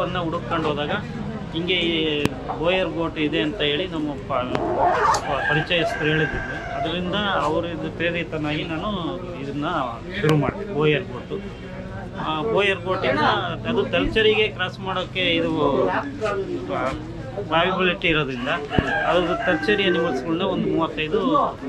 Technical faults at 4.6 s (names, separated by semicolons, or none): loud pop